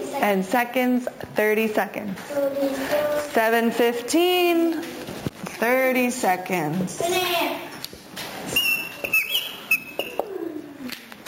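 All the way through there's imaging from sample-and-hold upsampling. It fits a 16 kHz source raised to 44.1 kHz by simply repeating samples. Mirrored copies land from 8 kHz to 16 kHz at about 16 dB down, giving a metallic fizz that tracks the sound's level.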